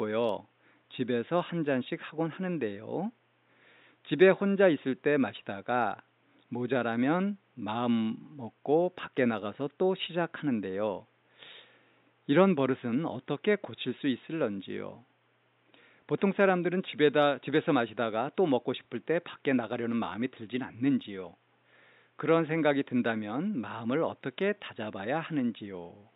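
Nothing stood out on listening to this speech recording, and the faint room noise sits about 42 dB below the speech as part of the original recording.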